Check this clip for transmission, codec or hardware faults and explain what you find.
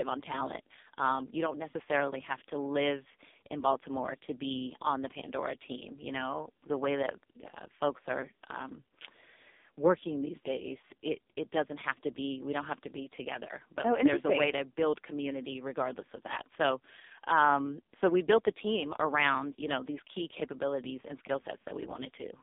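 One codec fault runs through the whole clip. AMR narrowband mobile codec throughout: heavy damage pointing to its lowest 4.75 kbps mode, the speech confined to 250 Hz–3.7 kHz and sounding buzzy and synthetic.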